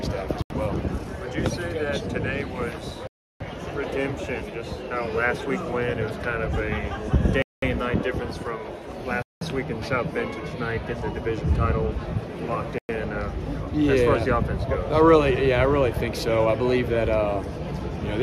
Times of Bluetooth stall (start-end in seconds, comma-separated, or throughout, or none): 0.42-0.50, 3.07-3.40, 7.42-7.62, 9.22-9.41, 12.78-12.89